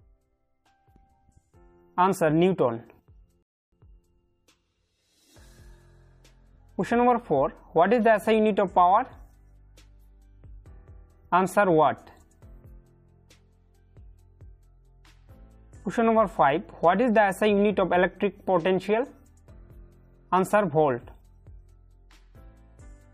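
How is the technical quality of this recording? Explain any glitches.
There is one glitch, a rebuffering stall from 3.43 to 3.72 s. The player exhausted its supply of downloaded audio and had to halt until more data arrived, so the sound drops abruptly into silence for about 0.3 s, then picks up again at the exact point where it broke off. No material is skipped or repeated. The pause simply inserts roughly 298 ms of dead air, stretching the timeline by that amount.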